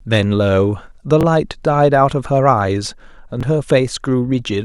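A speech clip with two brief Bluetooth stutters, at 1.21–1.23 s and 3.41–3.43 s. Each time, a packet arrived late or not at all, so the receiver replayed its last slice of about 21 ms, which fits a single lost packet, before the speech carried on as though it had kept playing. On a waveform each shows a duplicated short cycle block. On a spectrogram it appears as a thin repeated column with hard vertical edges.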